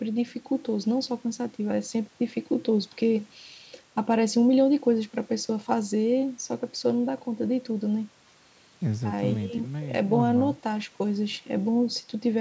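Nothing in this speech stood out as a fault on listening, and the missing lowest bass and absence of content above 8 kHz are simply the expected result of ordinary call microphone processing.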